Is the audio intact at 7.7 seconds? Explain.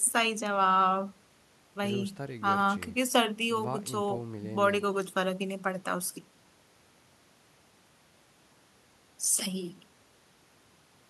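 Yes, at 7.7 seconds the speech runs intact, with no dropout, click, distortion or other technical fault at that point.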